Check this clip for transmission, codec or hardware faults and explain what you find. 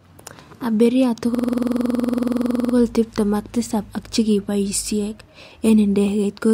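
One fault is present, a system hang loop. From 1.35 to 2.74 s the system stalled while the audio hardware kept replaying its ring buffer. A single 46.4 ms slice, which fits a 2048-sample buffer, repeats 30 times, producing a rapid, rattling buzz at 21.5 Hz until speech resumes with "tipten ak tisap ak".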